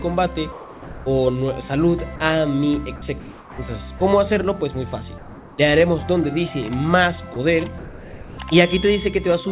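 Telephone-band audio with nothing above 4 kHz, as a narrowband call codec such as G.711 would give, is repeatedly cut by what is likely sound dropped by the voice detector. Content gives way to steady hiss at 0.52–1.06 s, 2.16–2.20 s, 2.96–3.02 s, 3.20–3.58 s, 3.98 s, 7.34 s and 7.78–8.38 s. The longest gaps erase about 0.35 s and 0.47 s of real sound. The detector judged that material to be background, stopped sending, and the receiver filled the gap with synthetic noise until transmission resumed. On a waveform these show as abrupt drops to a flat, low noise band. A spectrogram shows the detailed structure snapping off into smooth, uniform grey. At 5.18–5.58 s, what is likely comfort noise in place of the background replaces the real background, which sits about 23 dB below the loud parts, with featureless noise about 2 dB quieter. The spectrogram loses its texture there, and the waveform envelope turns slightly lower and unnaturally even.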